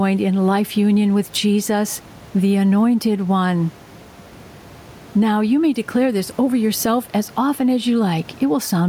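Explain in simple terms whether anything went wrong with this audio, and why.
Gain pumping runs through the whole recording. The loud and quiet parts of the speech end up closer in level, and the sound is squashed. The likely cause is recording gain set too high, with an automatic level control pulling it down whenever speech gets loud.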